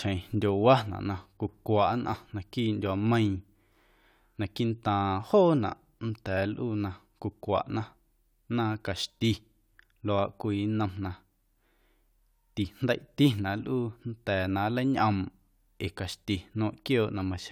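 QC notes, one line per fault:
No faults heard in this speech clip.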